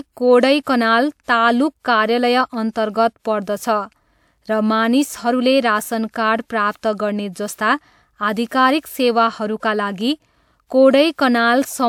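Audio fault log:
0.62–0.67 s, 1.24–1.28 s, 7.55–7.58 s, 8.48–8.51 s (just before "सेवाहरूका लागि"), 11.13–11.18 s, pre-echo: a brief hiss of 34 to 54 ms leads each sharp onset, softening the attack. The codec spread its quantisation noise across a whole transform block, so the noise sized for the loud attack also fills the quiet moment before it.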